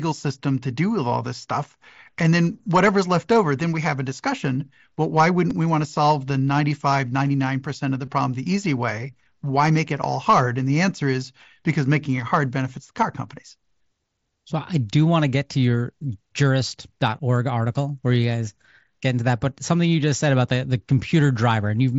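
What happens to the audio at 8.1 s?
Between 8.05 and 8.08 s, just after "of the" and before "problem the easy way", there is concealed Bluetooth headset packet loss. Roughly 22 ms of audio never arrived, which fits a short run of lost packets. The receiver filled the gap by repeating a best-matching stretch of the preceding waveform, producing a brief buzzy held tone with a slight warble where the real signal resumes.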